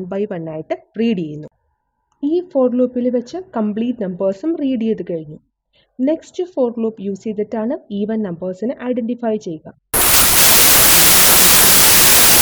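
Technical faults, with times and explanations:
9.94–12.41 s, wrong sample width: loud noise buries the signal, which plays at 0.75 speed and lower pitch, consistent with 32-bit samples read as packed 24-bit.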